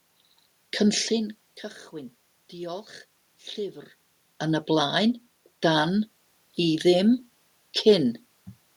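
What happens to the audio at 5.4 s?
At 5.4 s the speech carries on intact, with no dropout, glitch or distortion, only the background noise of the room.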